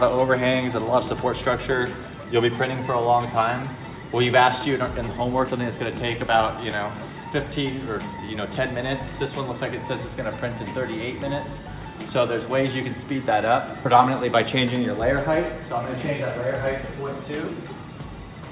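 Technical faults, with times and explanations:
5.48–5.50 s, skip ahead: audio was dropped, either on the way or by the receiver's buffer, while later audio was already waiting, and roughly 0.4 s of sound vanishes. The two sides meet almost directly, so the sound lurches forward with no audible gap.
5.58–6.82 s, jitter buffer speed-up: the buffer still held more delay than it wanted, so the receiver kept snipping out short pitch-period-length pieces, around a tenth of a second in total. The sound runs at 109% speed with unchanged pitch and feels briefly hurried, within the 4 kHz band of the G.711 mu-law call path.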